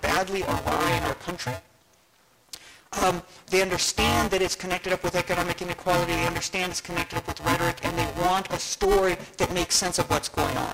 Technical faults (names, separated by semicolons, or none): buffer tearing